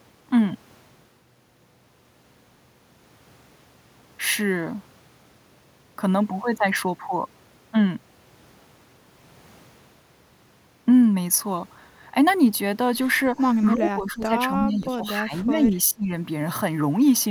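From 13.74 to 14.33 s, 14.56 to 15.05 s and 15.23 to 16.12 s, the speech dips by about 10 to 15 dB. This is speech suppressed in double talk, likely an echo canceller muting overlapping talk.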